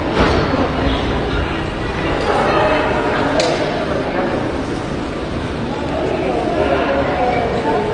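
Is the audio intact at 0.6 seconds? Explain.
No. Throughout the clip, including 0.6 s, the audio was likely transcoded between lossy codecs, pointing to AAC-LC then HE-AAC at low bitrates, so stacked smearing and a hard cut-off at 10 kHz remain.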